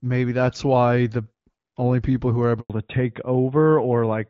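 At 2.60 s the speech cuts out for a handover gap of 100 ms, ending at 2.70 s. While the call switched networks, no speech frames arrived, so the sound fades within a few tens of milliseconds into silence. The waveform flattens to nothing, and the spectrogram shows a blank vertical band across all frequencies.

From 2.70 s to the end comes a fallback to narrowband. The speech before it has the light codec colouring of HD Voice at a rate near 12.65 kbit/s. After the switch the older narrowband codec keeps nothing above 4 kHz, so the sound turns duller and rougher. On a spectrogram the upper energy stops abruptly at a flat 4 kHz ceiling.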